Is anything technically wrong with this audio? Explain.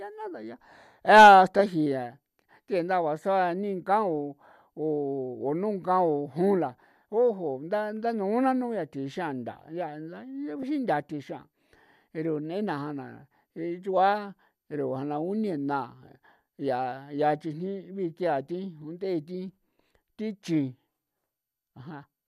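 Yes. Damaged data in a compressed stream at 10.62 s: corrupted bytes make the decoder misread the frame there and lose sync while it hunts for the next valid header. The result is a brief glitch in the speech.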